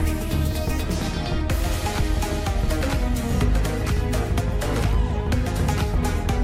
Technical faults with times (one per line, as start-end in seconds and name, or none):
2.81 audio missing between chunks
4.79 audio missing between chunks